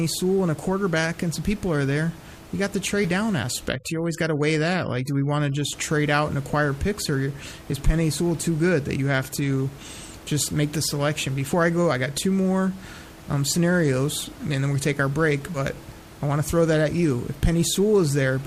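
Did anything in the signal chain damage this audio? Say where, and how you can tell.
Yes. At the codec stage, whole compressed frames went missing or were rejected by the decoder, so playback jumped forward. The jumps fall at 3.04 s, at 10.42 s, and over 15.54 to 15.59 s. The gaps they leave sound like roughly 40, 20 and 70 ms of lost audio, which fits a few 10 ms frames dropped each time.

Between 3.68 and 5.73 s, the call-processing stage applies overdone noise removal. The suppressor, working against room noise sitting about 21 dB below the speech, shuts individual frequency bands whenever they come close to its noise estimate. Quieter parts of the speech get cut along with the noise. The background collapses into near silence sprinkled with twinkling specks.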